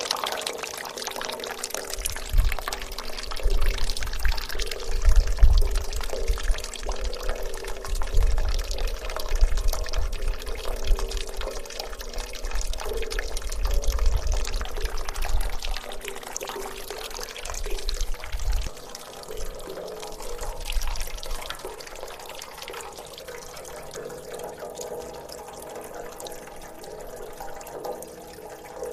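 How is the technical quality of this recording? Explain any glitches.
No audible glitches or faults.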